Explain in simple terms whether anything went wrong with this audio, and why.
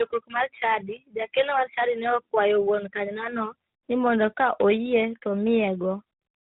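Something did go wrong, and it lasts the whole clip: tandem speech coding. The call seems to have crossed two phone networks that each squeeze speech with their own codec, so the audio was unpacked and squeezed again at the handover. The second squeeze works on already damaged sound, so the voice ends up rougher, more muffled and warbly, with nothing above about 3.8 kHz.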